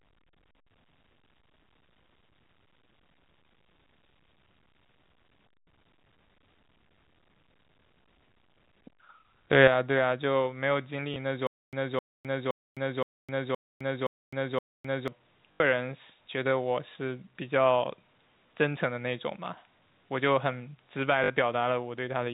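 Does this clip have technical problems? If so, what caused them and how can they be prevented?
Yes. Input switched to a poorer device from 9.68 s to the end. With no gap at the change, the sound turns duller, drops by a few decibels, and gains a new noise floor roughly 50 dB under the signal. The likely cause is the system swapping to a lesser microphone or a headset call profile. Locking the input device for the whole session prevents this.

Packet loss with last packet repeated occurs at 11.14–11.16 s, 15.52–15.60 s and 21.24–21.30 s. The receiver replays the last audio fragment to fill each gap, so 20, 80 and 60 ms are covered by repeats whose 20 ms spacing fits 20 ms packets. A steadier network plus forward error correction or proper loss concealment would prevent it.

Stutter with silent gaps runs from 11.47 to 15.08 s. A 260 ms burst returns seven times, every 0.52 s, with about 260 ms of digital silence after each, and the audio due in that span is lost. 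A stalled player or stream retrying is the likely cause. A larger playback buffer and reconnect logic that resumes instead of replaying would prevent it.

The G.711 telephone coding itself adds no audible damage beyond its usual narrow band.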